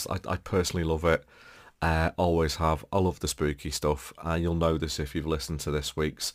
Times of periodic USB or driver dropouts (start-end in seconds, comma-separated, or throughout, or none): none